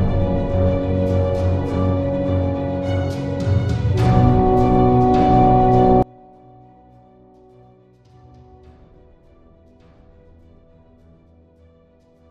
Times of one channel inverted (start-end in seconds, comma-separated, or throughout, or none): 6.02-12.30